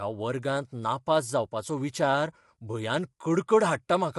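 A speech clip with plainly audible low-delay AAC compression throughout: rough, grainy voice, nothing above 11.6 kHz, likely AAC-ELD at a low bitrate, something like 32 kbps.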